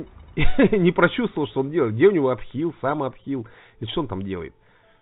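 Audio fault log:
No faults found; the audio reaches the listener over a WebRTC call path whose G.711 mu-law coding at 64 kbps leaves nothing above 4 kHz.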